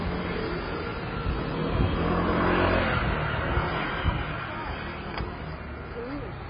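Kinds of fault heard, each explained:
AAC compression: The whole clip is dull and smeared, with nothing above 5 kHz and a warbling, fizzy texture on sustained parts. This is likely heavy low-bitrate AAC-LC coding, which fits around 16 kbps. That narrow budget forces a low cut-off and leaves holes across the spectrum.
loud pop: A single sharp pop sits on top of the sound from 2.71 to 2.74 s, peaking roughly 5 dB above it. The sound carries on underneath. This is likely a brief voltage pulse added to the signal, such as a switch, static or driver glitch.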